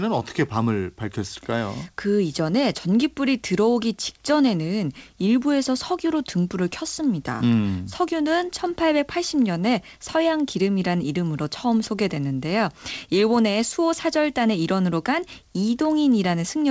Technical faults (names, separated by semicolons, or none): none